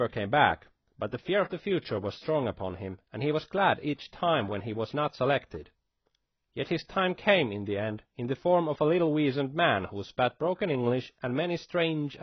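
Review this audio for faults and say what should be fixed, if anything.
The speech is dull and smeared across the whole clip, with nothing above 6 kHz and a heavy warbling, fizzy texture on sustained sounds and sibilants. This is likely AAC compression, specifically AAC-LC squeezed hard enough that the encoder dropped high frequencies and quantised the remaining bands too coarsely, leaving spectral gaps and swirling artefacts. The degree of damage fits a bitrate around 16 kbps. Prevent it by encoding speech at 64 kbps or higher, or by keeping a lossless master.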